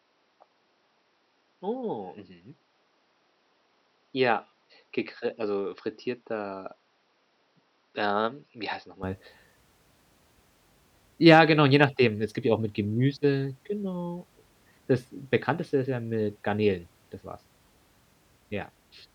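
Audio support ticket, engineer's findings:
0.00–9.03 s: speech dull and band-limited, nothing above 5.8 kHz. Level about 5 dB lower. Faint added background noise. Clean switch at 9.03 s, no gap. Likely input switched to a poorer device, narrower capture path, before recovering.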